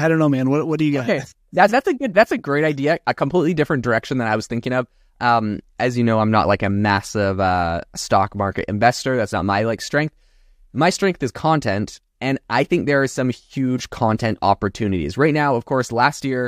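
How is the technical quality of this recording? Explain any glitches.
The signal holds steady throughout, with no glitches or technical faults to explain.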